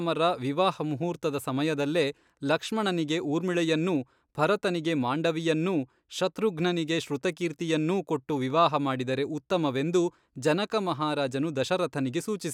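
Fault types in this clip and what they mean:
No faults found in this speech recording.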